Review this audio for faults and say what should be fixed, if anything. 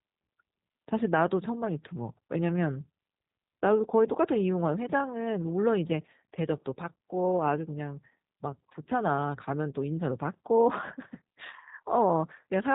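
Throughout, the speech sounds rough and slightly synthetic, with nothing above 3.8 kHz. That is G.729 codec damage: the speech is rebuilt from a vocal-tract filter, pitch prediction and a few pulses, at a rate that fits 8 kbit/s. To prevent it, record or route the call through a wideband or lossless path instead of G.729.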